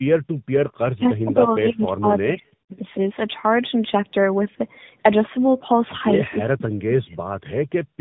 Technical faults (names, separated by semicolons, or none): tandem speech coding; speech suppressed in double talk